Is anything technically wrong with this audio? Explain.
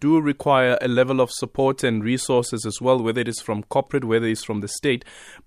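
No, no technical faults heard.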